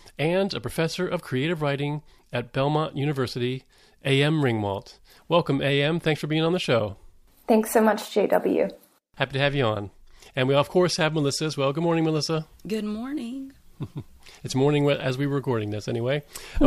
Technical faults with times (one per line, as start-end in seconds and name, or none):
none